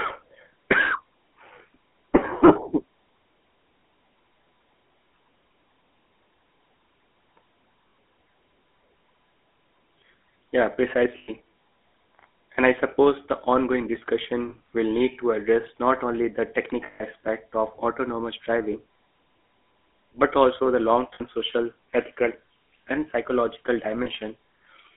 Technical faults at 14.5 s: GSM full-rate codec; lost GSM frames

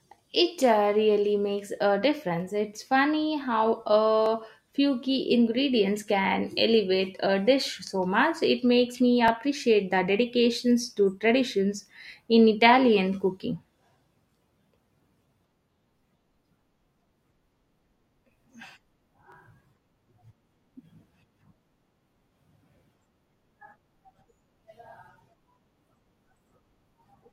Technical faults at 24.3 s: overlapping chunks

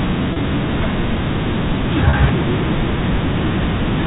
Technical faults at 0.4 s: packet loss with pitch repetition

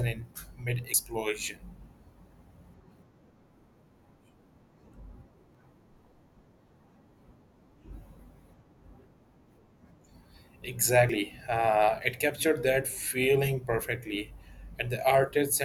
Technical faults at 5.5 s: dropped buffer (overrun)

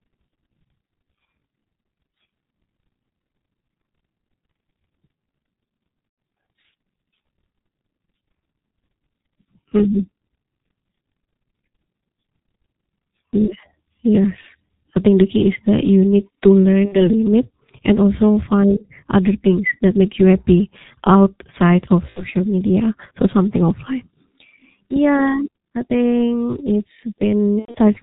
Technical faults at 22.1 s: G.723.1 codec; VoIP packet loss concealed by the speech codec

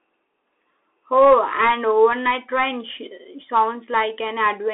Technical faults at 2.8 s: Bluetooth CVSD headset codec

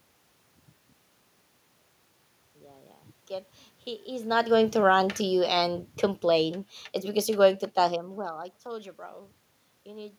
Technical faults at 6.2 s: automatic gain falling

